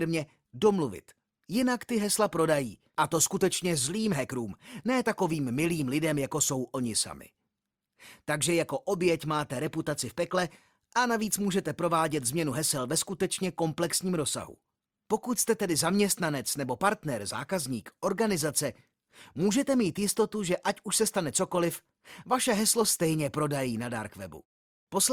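No technical faults can be heard anywhere in the recording.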